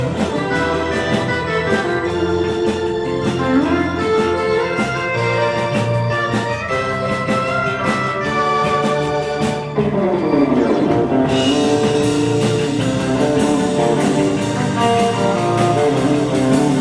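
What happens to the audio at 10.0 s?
Nothing goes wrong at 10.0 s: the audio plays through that moment intact, with no dropout, click, glitch or other fault.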